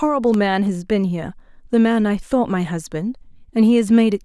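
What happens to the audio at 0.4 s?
A sudden voltage step or pulse, likely from a switch, plug, static discharge or driver glitch, is added to the signal just before that point, from 0.34 to 0.36 s, producing a single loud pop. The downstream circuitry shapes that brief pulse into a sharp click-like thump peaking a few decibels above the speech. The speech continues unbroken underneath it, so the pop sits on top of the audio rather than interrupting it.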